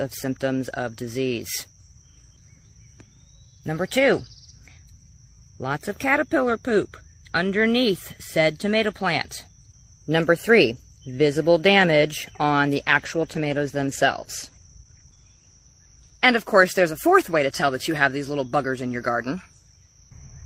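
From 12.74 to 17.99 s, a call bitrate drop makes the sound coarse and grainy, fitting a fall to about 15 kbps. Unlike packet loss, nothing drops out.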